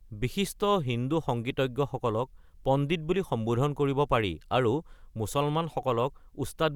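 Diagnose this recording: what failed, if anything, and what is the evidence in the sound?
Nothing failed here: listening through the whole speech recording, there's no point where the sound breaks, jumps or changes character in a way that would point to a problem at any stage of the chain.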